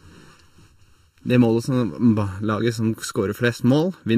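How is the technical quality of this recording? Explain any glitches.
There's one real problem, and it runs through the whole clip: channel delay (comb filtering). One channel trails the other by under a millisecond, so the mono sum cancels at evenly spaced frequencies starting around 700 Hz, leaving the speech hollow and phasey.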